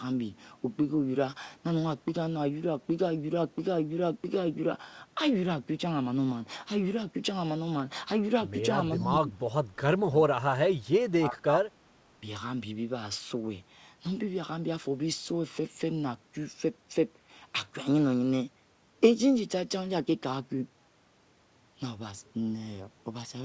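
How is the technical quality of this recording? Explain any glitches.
The speech gets clipped away in a few spots around 9 to 12 seconds, and the whole thing is band-limited, with nothing above 8 kHz, which fits a G.722 call codec at 64 kbps. The dropouts look like speech suppressed in double talk: at 8.97–9.44 s, 9.74–9.82 s and 9.99–11.69 s the voice sinks by roughly 15 to 30 dB, worst in that last stretch. The likely cause is an echo canceller that couldn't tell this talker from the far-end echo and ducked both.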